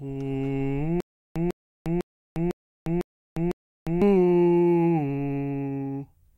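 From 1.00 to 4.02 s the music falls into a stutter with silent gaps: a 149 ms burst repeats six times, each followed by about 353 ms of dead silence, so it pulses every 502 ms. That's likely a stalled stream replaying its last fragment, and the music meant for that stretch is gone.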